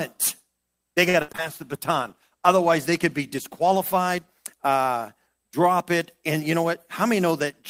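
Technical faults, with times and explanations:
1.09–1.40 s, repeated packet loss (robotic sound): The speech turns choppy for about a third of a second, with four short holes, the longest about 65 ms. Packets kept going missing or arriving too late, and each hole was filled by stretching the preceding sound. Roughly half of this stretch is patched-in rather than real audio, and those synthetic continuations give it the choppy, broken-up quality.
1.43–4.56 s, call bitrate drop: Right after the choppy patch, the speech goes rough and watery and loses its brightness for about three seconds. It clears before "uh drop it". The encoder was handed a much smaller bit budget, consistent with a fall from around 32 to 17 kbps, and held near the bottom for about 2.3 s. With fewer bits the sound is coded more coarsely and the upper frequencies are trimmed away, which causes the dulled, smeared sound.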